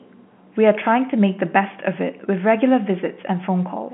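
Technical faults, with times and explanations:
No technical faults turn up here, just speech carried over an ordinary G.711 A-law phone line, so it has that familiar narrow telephone band of roughly 150 Hz to 3.4 kHz with nothing above about 3.8 kHz, which is simply how that format sounds.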